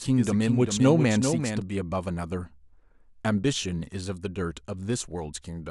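A speech recording that opens with a doubled audio track already under way and continuing to 1.62 s. A second full-band copy of the same speech trails the original by roughly 400 ms, a few decibels quieter, with no decay or room colouring, so it reads as a distinct echo rather than reverb. It cuts off abruptly at 1.62 s. The likely cause is the signal being captured twice, once through a slower path, or an edit leaving two misaligned copies.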